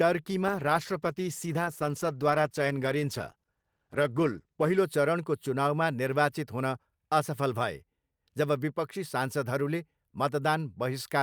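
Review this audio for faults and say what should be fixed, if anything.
A call bitrate drop affects the speech from 0.49 s to 4.87 s. The encoder is working with far fewer bits over that stretch. It codes coarsely and strips the high frequencies, so the speech sounds rough, watery and muffled for about 4.3 s before clarity returns. The degradation fits a fall from around 64 kbps to about 13 kbps after the bandwidth estimate dropped. To prevent it, damp the bandwidth estimator's response to short congestion and set a higher minimum encoder bitrate.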